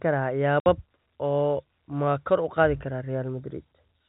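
At 0.6 s the speech drops to dead silence for 60 ms. This is packet loss filled with silence, likely two 30 ms packets, with hard edges.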